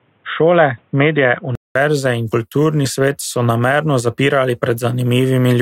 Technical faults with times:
0.00-1.75 input switched to a poorer device

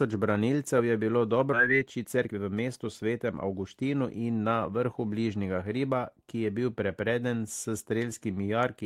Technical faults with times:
1.53-1.55 skip ahead
1.63-3.67 jitter buffer speed-up

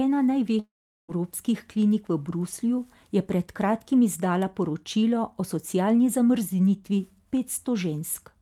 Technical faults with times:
0.59-1.10 long network dropout

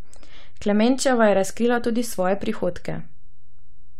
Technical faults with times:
0.00-4.00 DC offset

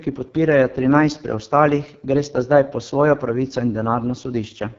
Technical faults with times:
0.00-4.79 AMR wideband (HD Voice) codec

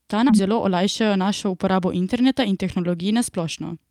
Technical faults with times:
0.29-0.31 skip ahead
0.39-2.78 jitter buffer speed-up

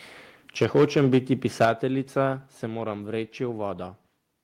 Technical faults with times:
0.61-1.18 microphone overload
0.64 microphone volume stepped down
1.60-1.69 microphone overload
1.65 microphone volume stepped down
2.67 microphone volume stepped down

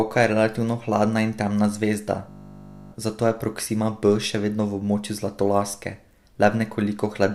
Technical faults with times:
2.30-2.92 system hang loop

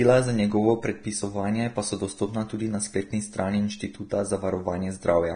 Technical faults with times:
0.00-5.35 Vorbis compression

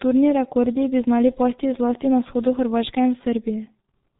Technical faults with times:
0.00-4.19 G.723.1 codec

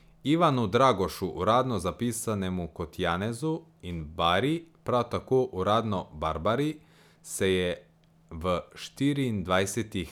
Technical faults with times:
none

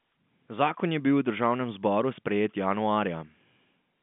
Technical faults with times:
none

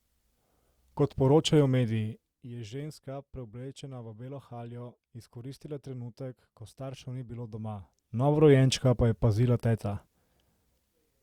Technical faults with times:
2.02-2.52 zipper noise
7.29-8.56 zipper noise

